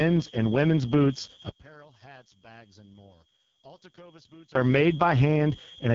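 A speech recording runs throughout with a switching supply whistle, a thin high tone sitting between 3.24 and 3.27 kHz, roughly 20 dB below the voice. Its pitch wanders within that narrow band as a power converter's burst-mode rate shifts with load. That drift sets it apart from mains hum or a fixed feedback ring, which stay locked in pitch. On top of that the speech carries heavy AMR wideband (HD Voice) codec damage. The voice sounds rough, raspy and buzzy, which fits the lowest AMR-WB mode, where the pulse-driven vocal model has too few bits to follow the voice cleanly. Nothing reaches above 7.5 kHz, and the top band sounds like shaped noise rather than real detail. The grainy, buzzy texture marks it as speech-model coding, unlike the swirly, watery artefacts of a transform codec such as MP3.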